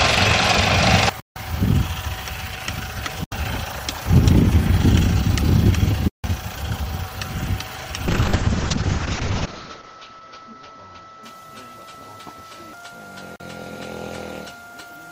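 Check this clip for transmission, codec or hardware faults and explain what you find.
Two kinds of fault are audible: four blocks of digital silence and one call bitrate drop.

The sound vanishes abruptly four times, at 1.2 s for 160 ms, at 3.24 s for 80 ms, at 6.08 s for 160 ms and at 13.36 s for 40 ms. Each edge is abrupt because nothing fades. The longer gaps register as holes, and the 40 ms one is closer to a pop. These are blocks of digital silence: runs of samples set to zero, likely when the output buffer was not filled in time.

From 8.08 s to about 12.29 s the audio turns muffled and rough, with a watery, smeared texture. The worst stretch lasts about 1.65 s before it improves. The top end falls from a full 20 kHz to a cut-off near 8 kHz. This is a call bitrate drop: the bandwidth estimate fell, so the encoder was told to spend far fewer bits, which fits a drop from around 48 kbps to 6 kbps. 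The encoder coarsened its coding and cut the highs until the rate recovered.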